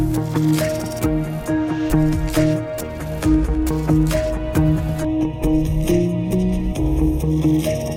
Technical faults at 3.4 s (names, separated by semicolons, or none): none